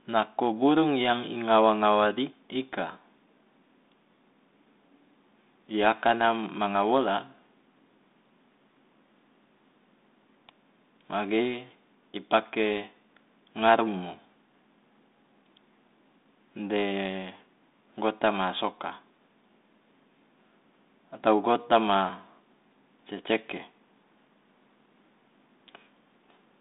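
No technical faults can be heard in this speech.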